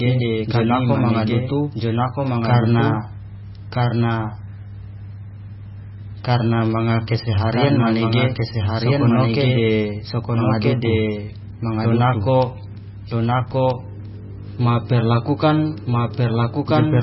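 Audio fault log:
throughout, doubled audio track: a second full-band copy of the speech runs about one and a half seconds behind, at roughly the same level, with no decay or room colour, likely from the audio being captured twice or two out-of-step copies left in an edit.
throughout, MP3 compression: nothing is heard above 5.6 kHz, and the heavy watery, swirling texture with smeared attacks fits a bitrate near 17 kbps; the encoder likely ran short of bits, cutting the treble and switching weak frequency lines on and off between frames.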